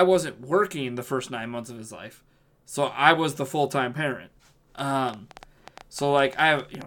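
Something, likely interference from nearby equipment or a faulty connection, injects repeated pulses from 4.79 to 6.83 s, just after "the full time parent". This train of clicks gives around fifteen similar pops, about 7.4 per second but unevenly spaced, peaking about 5 dB above the speech.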